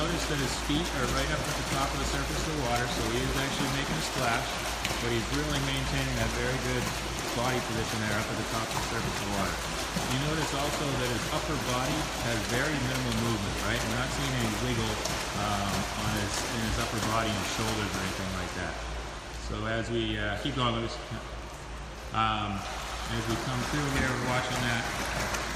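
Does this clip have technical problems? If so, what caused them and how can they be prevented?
No, no technical faults here.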